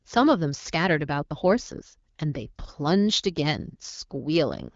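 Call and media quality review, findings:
No faults found in clip.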